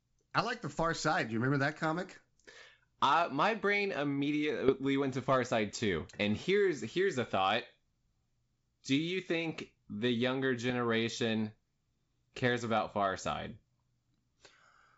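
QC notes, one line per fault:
4.68–4.81 s, bit errors on an ADPCM link: a rough burst of pops with a brief change in level, just before "went to". Flipped bits throw off the decoder's step size and predictor, so each error rings on for milliseconds instead of clicking once. A low error rate, under a fifth of a percent.
10.70–10.73 s, bit errors on an ADPCM link: a shorter pop and level wobble right after "you think the younger". The error rate is about double, but it recovers fast.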